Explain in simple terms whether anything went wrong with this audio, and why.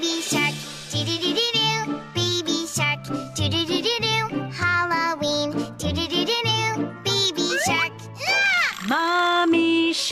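Nothing went wrong here: no audible fault occurs anywhere in the recording.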